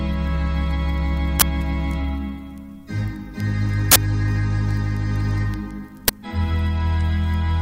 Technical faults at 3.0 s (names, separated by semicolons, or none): none